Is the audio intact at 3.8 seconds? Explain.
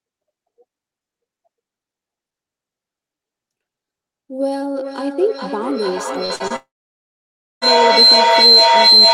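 Yes, the speech at 3.8 seconds is intact, with nothing beyond the ordinary character of the call path it passed through.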